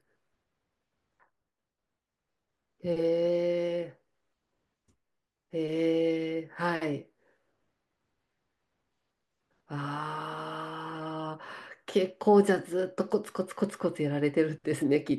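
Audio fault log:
No faults heard anywhere in this speech recording.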